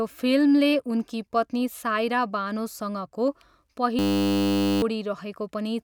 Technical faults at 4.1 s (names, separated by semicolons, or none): system hang loop